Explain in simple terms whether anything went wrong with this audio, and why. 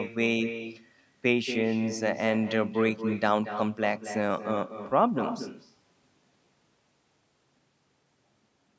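Something did go wrong: this is echo with no canceller, and it runs through the whole recording. The person on the other end had the call on a loudspeaker, their microphone caught it, and nothing stripped it out. So every stretch of speech returns roughly a fifth of a second later as a quieter, thinner copy trailing behind it. The call's normal microphone filtering is also audible, with nothing above 8 kHz.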